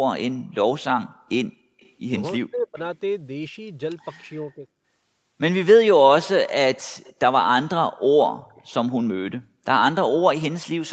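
At 1.8 to 1.92 s a faint copy of the speech arrives about 0.3 s late, roughly 35 dB below it. This is an echo leak, likely a loudspeaker pickup the echo canceller did not fully remove. Speech suppressed in double talk follows: from 2.37 to 2.78 s the speech drops by roughly 40 dB, and from 4.49 to 4.67 s by about 15 dB, likely the canceller turning the talker down while both sides spoke. The same delayed echo returns at 7.04 to 7.13 s, slightly louder at about 30 dB down, and again at 8.55 to 8.62 s.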